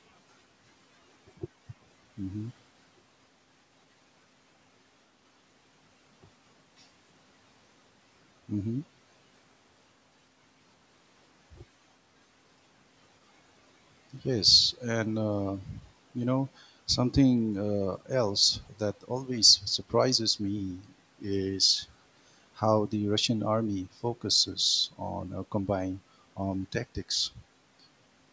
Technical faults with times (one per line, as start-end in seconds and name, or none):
none